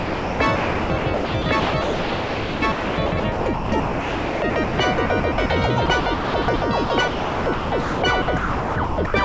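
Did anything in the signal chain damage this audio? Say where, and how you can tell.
Yes, at the call-processing stage. The sound is chopped by the voice detector from 0.0 to 5.5 s and 5.86 to 9.14 s. About 3.7 s and 1.9 s become synthetic comfort noise, likely from switching transmission on and off.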